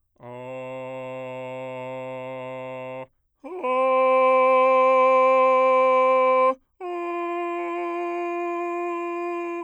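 No technical faults are audible.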